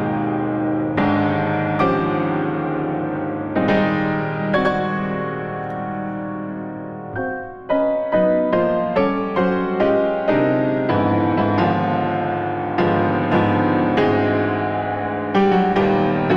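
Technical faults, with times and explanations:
No technical faults are audible.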